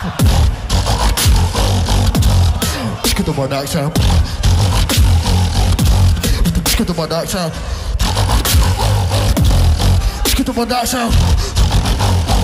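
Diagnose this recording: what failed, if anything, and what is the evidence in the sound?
Nothing failed; no faults heard.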